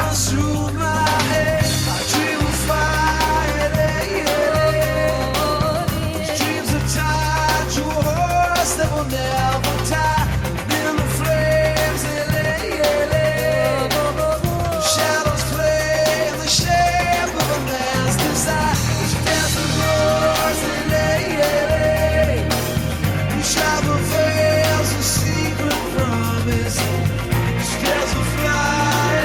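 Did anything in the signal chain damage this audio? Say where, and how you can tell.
No damage from the chain.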